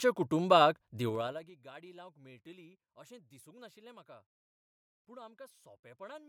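Zipper noise runs from 1.07 to 1.53 s, ending just before "गाडी लावंक": the level drops roughly 25 dB in unsmoothed 3 dB steps, about twenty per second, each step clicking audibly.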